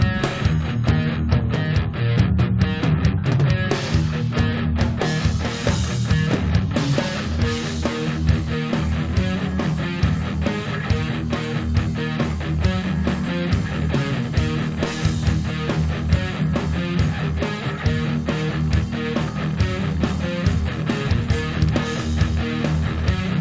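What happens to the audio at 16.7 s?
Nothing goes wrong at 16.7 s; the audio there is intact, passing through the call path with its usual G.722 band limit, so nothing is heard above 8 kHz.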